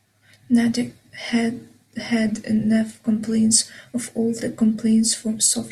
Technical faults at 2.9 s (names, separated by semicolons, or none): none